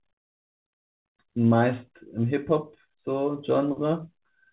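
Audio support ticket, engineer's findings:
No faults found in the speech. The call path audibly stops at 4 kHz, consistent with a narrowband G.711 mu-law telephone codec at 64 kbps.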